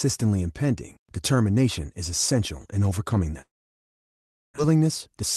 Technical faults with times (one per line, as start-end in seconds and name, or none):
3.41-4.60 long network dropout
4.68-5.24 jitter buffer speed-up